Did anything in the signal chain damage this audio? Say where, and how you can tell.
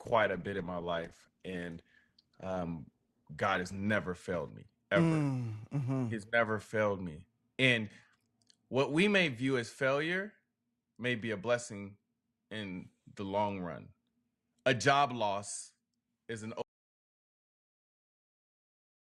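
Yes. An adaptive stream starting at a low bitrate affects 0.0 to 4.0 s, at the network and codec stage. The treble is dulled and the speech is smeared until just before "failed me ever", then clarity jumps with no gap. This points to a roughly 16 kbit/s Opus rendition stepping up to about 64 kbit/s once throughput was measured.

An audio dropout to silence starts at 16.62 s, right after "job loss is an", and lasts to the end. The signal falls to silence with no room tone, so the input stopped reaching the encoder, likely through a lost device or link, while writing continued.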